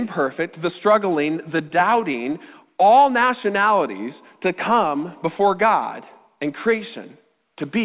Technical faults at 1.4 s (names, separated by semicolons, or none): repeated stalls (stutter)